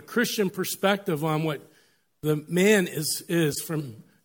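At 1.54 s a brief blip cuts through the speech: a corrupt frame decoded. Flipped bits in a single compressed frame reached the decoder, which reconstructed them with wrong gains or misread codes, putting energy at frequencies where it doesn't belong. The error peaks at about -30 dBFS. From 3.52 to 3.60 s the same fault spans a few consecutive frames, so it is heard as a longer, louder squeaky burst, peaking at about -20 dBFS.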